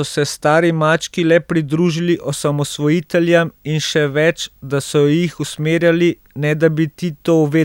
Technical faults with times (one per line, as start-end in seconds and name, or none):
2.08-7.65 video or display buzz